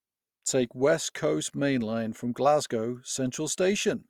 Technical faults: low-bitrate audio saved at a high bitrate

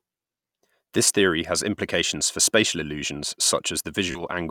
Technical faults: Bluetooth stutter

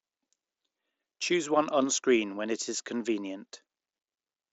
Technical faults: none

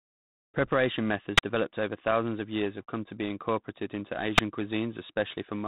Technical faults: G.726 ADPCM; invalid numbers at full scale

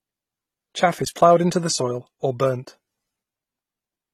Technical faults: transcoding between lossy codecs

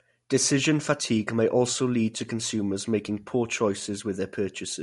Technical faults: MP3 compression

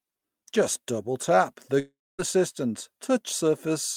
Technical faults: long network dropout

